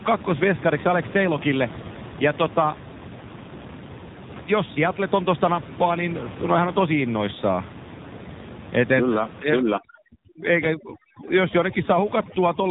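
From start to finish the speech carries the sound of an AMR narrowband mobile codec. Nothing above about 3.8 kHz survives, so the voice has the boxed-in, telephone quality of 2G and 3G calls, and the damage is plainly audible: a buzzy, synthetic edge to voiced sounds that fits a low bitrate around 7.4 kbps. On a spectrogram the energy stops at a hard ceiling near 3.8 kHz, with an empty band above.

From 9.42 s to 12.71 s there is overdone noise removal. The room noise, which sat about 14 dB under the speech, drops and breaks up, leaving small twinkling specks between phrases. Quiet parts of the voice are cut along with the noise. A spectrogram shows a dark, clean background broken by isolated bright dots, and speech harmonics with ragged gaps.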